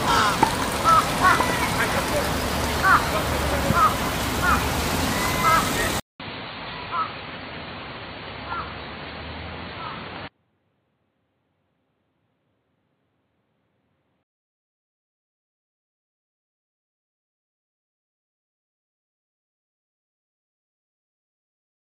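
The input likely switched to a poorer device from 6.00 to 14.43 s: after a 200 ms silence, the audio loses everything above 4.5 kHz, sounds dull and boxy, drops about 10 dB, and gains a faint new noise floor before clearing again.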